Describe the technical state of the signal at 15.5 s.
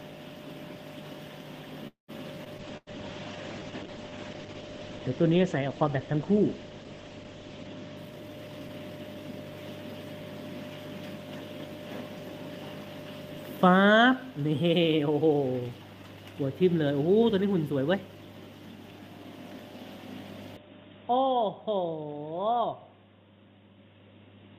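At 15.5 s the signal is intact, with no dropout, distortion, glitch or other technical fault audible at that point.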